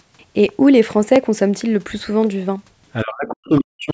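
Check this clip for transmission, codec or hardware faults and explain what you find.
One fault is present, near the end of the speech. From 3.03 s to the end at 3.93 s, the voice drops by up to about 40 dB for roughly a second. This is speech suppressed in double talk. The likely cause is the echo canceller mistaking the near talker for loudspeaker echo while the far side spoke, and attenuating both. The call microphone processing's band limit, with nothing above 8 kHz, is separate from this fault.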